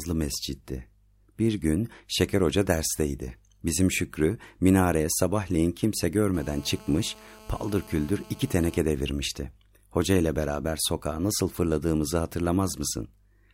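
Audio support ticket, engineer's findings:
GSM phone buzz, 6.34–8.77 s, after "minareye sabahleyin kimse": steady raspy 217 Hz buzz about 24 dB below speech, from a nearby 2G phone's bursts rectified in the audio circuit; spectrogram shows dense harmonic comb lines.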